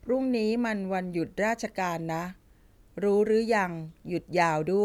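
No technical faults can be heard in the speech at any point.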